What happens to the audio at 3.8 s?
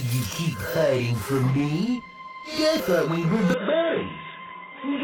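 An input switched to a poorer device from 3.54 s to the end: the recording likely changed to a narrower-band microphone or headset profile. With no gap at the switch, the sound turns dull and boxy, with nothing above 3.8 kHz, gets somewhat quieter, and picks up faint new background noise.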